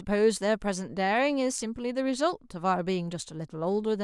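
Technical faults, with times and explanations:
Nothing stood out on listening to this speech recording; no technical problem could be heard at any point.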